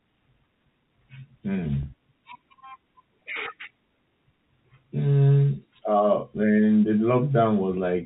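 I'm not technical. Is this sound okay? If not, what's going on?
No, there's one small glitch. At 1.83 s there's a packet loss with pitch repetition: a 30 ms chunk of speech went missing, and the receiver filled the gap by repeating the last bit of voice, so you hear a brief, slightly buzzy held sound.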